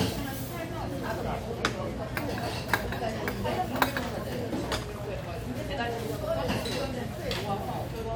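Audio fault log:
No audible faults detected.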